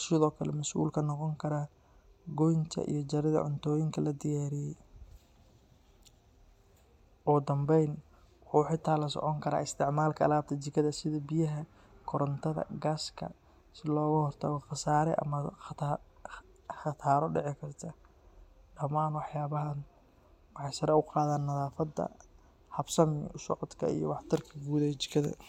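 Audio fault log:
No faults can be heard in this speech recording. There is nothing to log at any point in the audio.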